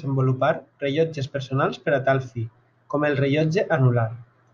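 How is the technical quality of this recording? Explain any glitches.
The recording has no glitches. Nothing in the speech needs a technical explanation.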